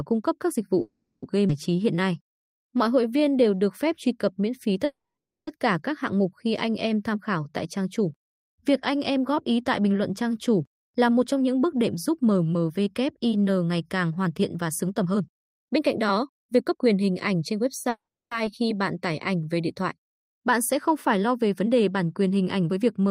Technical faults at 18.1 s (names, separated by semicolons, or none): call audio freeze